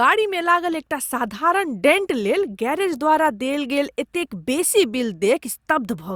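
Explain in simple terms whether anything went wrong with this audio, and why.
Nothing went wrong with this audio, because there are no faults to be heard anywhere in it.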